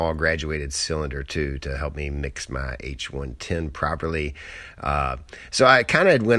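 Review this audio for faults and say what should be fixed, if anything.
Nothing here needs fixing; no faults were found.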